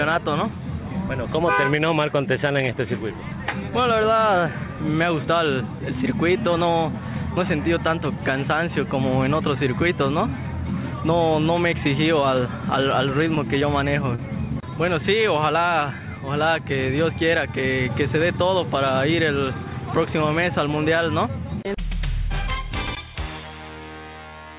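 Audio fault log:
13.35–13.39 s, short stall from a late packet: A packet arrived late and the jitter buffer ran dry, so the receiver held the last sound for about 20 ms, then resumed from exactly where it left off, leaving the rest of the audio about 20 ms later. Nothing is lost. What distinguishes it from concealed loss is a sound lingering slightly too long, with a slight buzz or dip.
13.59–13.63 s and 14.15–14.20 s, short concealed packet loss: Each time about 20 ms of audio never reached the decoder, and the receiver patched the gap by extending the preceding sound, either repeating its pitch or generating shaped noise, for about 20 ms and about 23 ms, then crossfading back. Unlike the stall, real audio is gone here. Each gap is heard as a brief smear or wobble that can swallow a short sound. The narrow, telephone-like band with nothing above 4 kHz comes from the G.711 A-law call path, consistent with a 64 kbps link.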